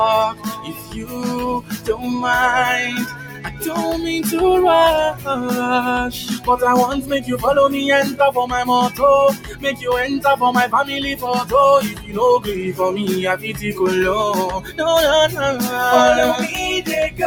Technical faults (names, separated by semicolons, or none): noise suppressor applied to music or sounds; sound cut by the noise suppressor